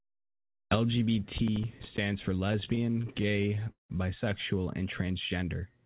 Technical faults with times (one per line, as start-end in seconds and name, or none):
1.38-1.98 processor overload crackle
2.48-3.92 repeated stalls (stutter)